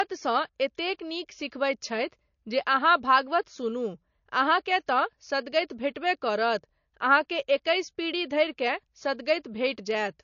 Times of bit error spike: 0.79, 9.91

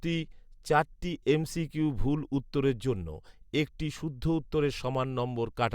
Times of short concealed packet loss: none

